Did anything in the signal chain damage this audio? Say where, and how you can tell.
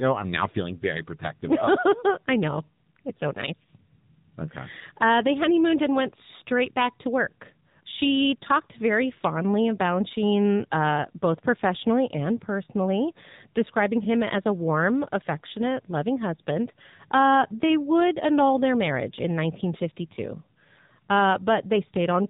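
Yes. Throughout, the speech sounds muffled and buzzy, with nothing above 4 kHz and a synthetic edge. That is AMR narrowband mobile codec damage at the codec stage: 8 kHz sampling plus a sparse pulse-driven vocal-tract model, which fits a low rate near 7.4 kbps.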